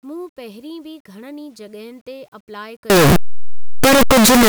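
Speech, stored as 8-bit audio, breaks up at 2.90 s and stays broken through 4.49 s. From that point the sound becomes extremely loud, harsh distortion, and quiet moments blast at the same level as everything else because each zero crossing turns into a full-range jump. This is most likely a signed and unsigned mix-up, where 8-bit samples are read with the wrong sign convention so the top bit is flipped.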